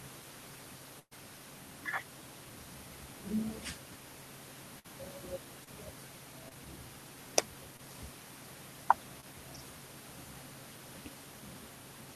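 At 0.99 s a burst of packet loss takes out about 120 ms of audio. The receiver extends the last sound for roughly 117 ms, fading it down to about 60 ms of silence before the stream resumes at 1.13 s with the missing stretch skipped. A shorter burst at 4.79 to 4.86 s drops about 60 ms, and roughly 51 ms of continued, decaying sound covers it. Both are heard as a held, fading tail followed by a jump forward.

Short concealed packet loss then occurs four times, at 5.64, 6.49, 7.77 and 9.21 s. Each drops about 20 ms. The decoder fills each hole with roughly 17 to 25 ms of extrapolated sound and blends back into the real signal. Each one comes across as a brief smear or wobble, and a short consonant can go missing.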